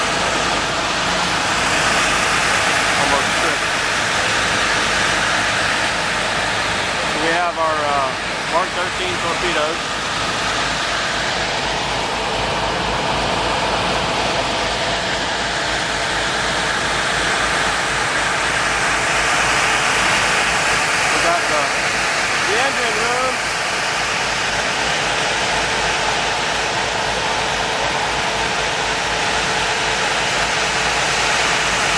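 No technical faults are audible anywhere in this recording.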